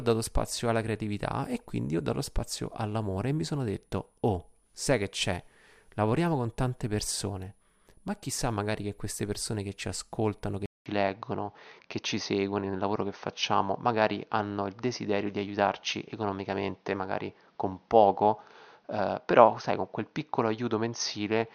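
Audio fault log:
10.66 s to the end, input switched to a poorer device: after a gap of about 200 ms the speech turns duller and boxier, with nothing above 6.4 kHz, a level shift of around 5 dB and new background noise sitting roughly 40 dB under the voice. The likely cause is the recording input jumping mid-take to a different, narrower-band microphone or headset profile, which brings its own bandwidth limit, gain and noise floor.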